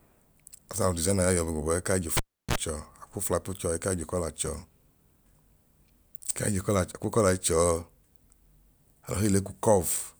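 Speech, with a cable pulled and plugged in between 2.17 and 2.56 s. A sharp pop opens a dropout of about 340 ms, where the waveform collapses to a near-flat line and the spectrogram goes almost blank. As the plug goes back in, the tip touches first, giving a 45 ms burst of 60 Hz mains buzz, seen as bright horizontal bands at 60 Hz and its harmonics. A second pop, a thin vertical stripe across all frequencies, marks where the speech returns.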